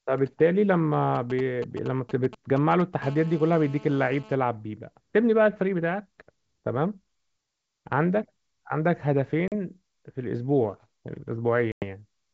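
From 1.15 to 2.82 s a galloping dit-dit-dit of short, raspy buzzes sits roughly 15 dB under the speech. These are GSM signalling bursts: a nearby 2G phone sending brief groups of radio bursts at a 217 Hz rate, which the audio circuit rectifies into sound.

Between 3.02 and 4.35 s the pattern turns into a continuous hard buzz at 217 Hz, rich in harmonics and about 21 dB below the speech. This is GSM phone buzz. The phone is now transmitting steadily as in a call, and every pulse is demodulated into the audio path.

At 9.48 s the wideband speech breaks into a sharp-edged 40 ms gap, which fits about two lost packets. At 11.72 s a longer 100 ms hole follows, consistent with around five. Both are packet loss on an ADPCM call. After each gap the speech comes back slightly distorted and settles over the next tens of milliseconds, because the decoder's predictor and step size have drifted out of step with the sender's.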